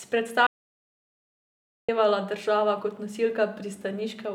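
From 0.47 to 1.89 s an audio dropout to silence erases about 1.4 s of speech before "država kot", likely a lost input; waveform flatlines, spectrogram blank.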